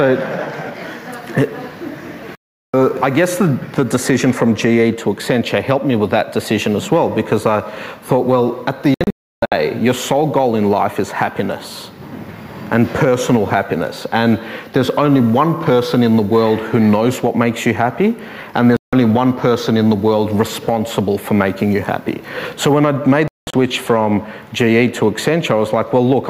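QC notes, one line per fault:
2.35 to 23.54 s, digital broadcast dropout: four mutes at 2.35–2.74 s, 8.94–9.52 s (broken holes, longest 320 ms), 18.77–18.93 s and 23.28–23.54 s (longest hole 190 ms). The receiver lost or rejected frames and silenced output until clean ones returned, so that audio is gone.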